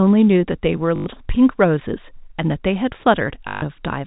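At 0.96 to 1.06 s and again at 3.48 to 3.62 s the speech hits packet loss with the last packet repeated. The receiver keeps replaying the last packet it got, so you hear a robotic stutter buzzing at about 50 Hz, which fits 20 ms packets. All of it rides on the band-limited G.711 telephone sound.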